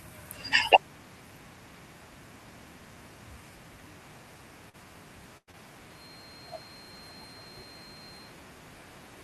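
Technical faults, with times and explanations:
4.69 to 4.75 s and 5.51 to 5.55 s, short concealed packet loss: about 40 ms, then 20 ms, went missing, and the receiver papered over each gap by extending the last sound, leaving a quick smear.
5.37 to 5.49 s, burst of packet loss: roughly 100 ms dropped in a row, so the last sound is held and fades out, then speech resumes further on with that bit gone.
5.87 to 8.38 s, feedback whistle: a thin, steady 4.2 kHz tone sits about 20 dB under the speech, swelling and fading slowly, likely a loudspeaker-to-mic loop hovering right at feedback.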